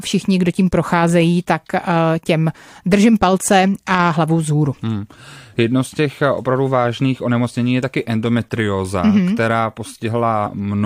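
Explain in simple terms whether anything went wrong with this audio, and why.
Compressed frames skipped, at 10.45 s: a short piece of the speech, roughly 20 milliseconds, was never played because that part of the compressed file was missing or rejected as damaged. The sound jumps ahead.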